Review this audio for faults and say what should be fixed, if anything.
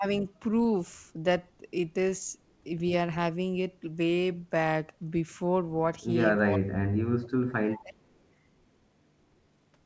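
Speech suppressed in double talk occurs from 6.45 to 7.28 s and again from 7.83 to 8.0 s. The speech sinks by as much as about 30 dB, for roughly 0.7 s in the first stretch and a brief moment in the second. The likely cause is the echo canceller failing to separate the local talker from loudspeaker echo while both sides spoke, so it turned everything down. A network dropout would instead leave gaps or glitches regardless of whether the far side is talking. To prevent this, tune the canceller's double-talk detection so it attenuates only the echo path rather than the near-end speech.

Echo leak appears in two short scraps, at 7.71 to 7.83 s and at 8.1 to 8.23 s. In each, a faint copy of the speech returns 356 ms late. The first is around 20 dB below the speech, and the second is much fainter, near 40 dB down. This is likely residue that a loudspeaker-side echo canceller failed to remove and sent back. 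The fixed 356 ms delay sets it apart from room reverberation, which follows the sound immediately and decays smoothly. To prevent it, give the far end's canceller enough tail length and adaptation, or have that side use a headset.

The band limit at 8 kHz is what a G.722 call path at 64 kbps produces and is not a fault.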